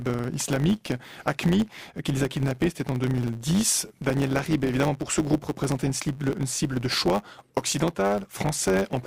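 A steady buzz at 100 Hz runs through the whole clip, and the sound moves about 1.07 times too fast while keeping its normal pitch. This is a truncated block size mismatch: one stage writes longer blocks, fitting 512 samples, than the next reads, discarding each block's tail.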